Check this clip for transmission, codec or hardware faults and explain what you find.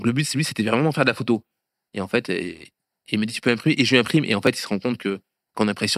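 One fault turns up in the speech: a repeated buffer at 4.47 s. A 2.67 ms chunk, which fits a 128-sample buffer, played one extra time when fresh audio ran late, giving a click or brief buzz.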